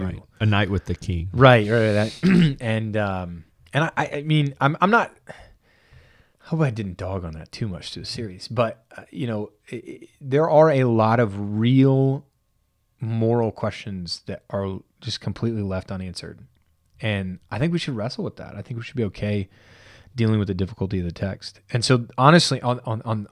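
No technical faults can be heard in the recording.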